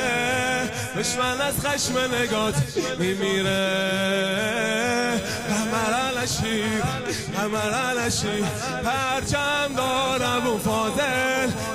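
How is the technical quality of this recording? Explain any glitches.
The recording is marred by one persistent fault. Computer activity noise runs throughout: a buzzy chirping near 1 kHz, roughly 15 dB below the sound, from load changes of the processor, graphics card or mouse modulating the shared ground. It follows the computer's activity rather than holding steady like mains hum.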